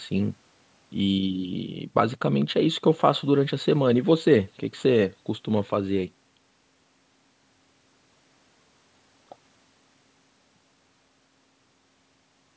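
Nothing in this speech points to a technical fault.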